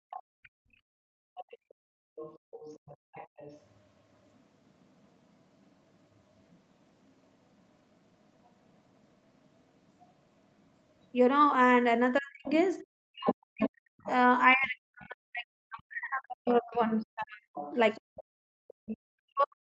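Other side's voice leaking through, from 0.1 to 11.04 s, 12.48 to 14.11 s and 16.74 to 18.97 s, is a second voice under this speech recording: faint at first, around 25 dB down, then much closer, roughly 10 and 15 dB below the talker. It is likely loudspeaker echo that the canceller failed to remove from the microphone. Speech suppressed in double talk runs from 12.19 s to the end, with the talker's voice dipping and breaking up, at its deepest by about 40 dB, while the far side is playing on the loudspeaker. The likely cause is the echo canceller turning everything down because it could not separate the two voices.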